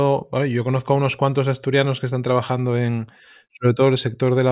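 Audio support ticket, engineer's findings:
No faults found on listening; nothing in the speech points to a failing component, and no action needed.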